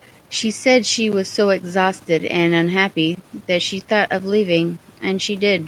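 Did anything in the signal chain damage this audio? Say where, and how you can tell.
No, I can't hear any damage at any stage of the chain in this speech.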